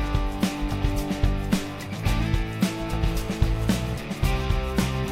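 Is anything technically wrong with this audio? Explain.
Yes. GSM phone buzz, 3.11 to 3.98 s: a nearby 2G phone on a call pulses at 217 Hz, and the rectified bursts form a steady, raspy harmonic buzz about 21 dB below the signal.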